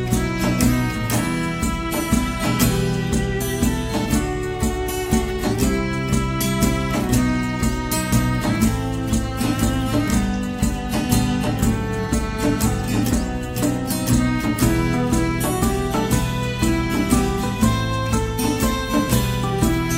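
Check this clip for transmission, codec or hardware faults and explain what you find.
No fault turns up anywhere in the clip. There is nothing to place in time or trace to a cause.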